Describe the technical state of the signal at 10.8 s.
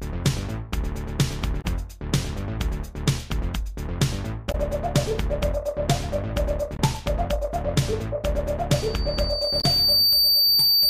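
At 10.8 s a loudspeaker feedback squeal is sounding. It begins at 8.72 s and runs to 10.90 s. A microphone is picking up the loudspeaker it drives. At 4.6 kHz the loop gain passes one, so that tone keeps feeding itself. It swells over roughly a second and a half into a steady, piercing whistle. By this point it stands a few decibels above the rest of the sound and dominates it.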